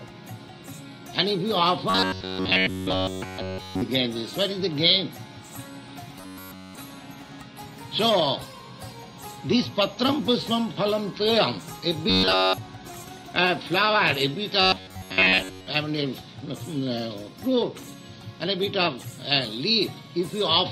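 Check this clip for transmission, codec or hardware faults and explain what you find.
There is a fault: robotic sound from repeated short buffers, in four stretches at 1.90 to 3.82 s, 6.18 to 6.75 s, 12.10 to 12.58 s and 14.62 to 15.67 s. Fresh audio likely stopped arriving on time, so the playback looped a single chunk of about 10.7 ms in place of the missing material. That loop imposes a fixed 93.8 Hz buzz, turning the sound metallic and rigid throughout the first three stretches and across most of the last.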